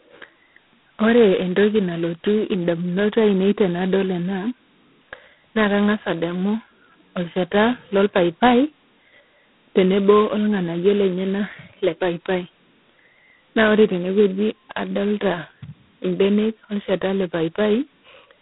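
Throughout, G.726 ADPCM coding at what sounds like 16 kbit/s adds a harsh, rasping hiss that tracks the speech level. Nothing passes above 3.9 kHz, but that level-following hiss is what sets it apart from plain telephone band-limiting.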